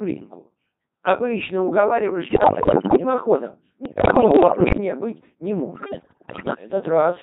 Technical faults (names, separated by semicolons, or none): Codec 2 vocoder; bit errors on digital voice radio